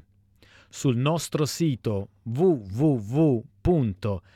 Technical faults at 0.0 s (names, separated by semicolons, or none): none